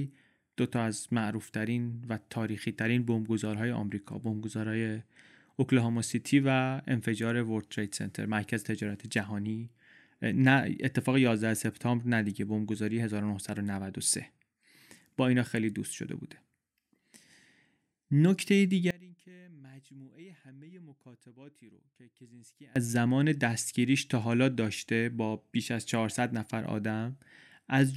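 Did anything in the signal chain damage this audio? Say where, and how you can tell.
Yes. One channel inverted, from 18.91 s to 22.76 s: the speech drops by about 26 dB to a faint copy, with the centred voice almost gone, before returning to full level. That collapse is what happens when one stereo channel flips polarity and the two are summed to mono, so everything common to both cancels and only their small difference survives. The likely stage is analogue wiring, such as a balanced lead with swapped conductors.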